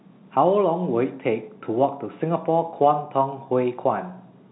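A speech recording with no technical fault to be heard. It carries G.711 telephone coding, so the sound stops at 4 kHz and only a faint trace of the format's level-following quantisation noise sits beneath it.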